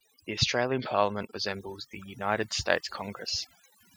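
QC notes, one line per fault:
Throughout: overdone noise removal. A noise reduction stage set far too aggressively is pulling individual frequency bands down to nothing whenever their level sits close to its noise estimate, so the quieter parts of the speech vanish along with the noise. Between phrases the background drops to near silence dotted with twinkling, chirpy specks. On a spectrogram the noise floor shows as black gaps scattered with isolated bright dots, and the harmonics look ragged and patchy.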